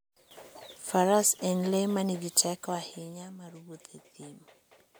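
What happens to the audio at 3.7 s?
Nothing goes wrong at 3.7 s: the speech carries on intact there, with no dropout, distortion or abrupt jump in level.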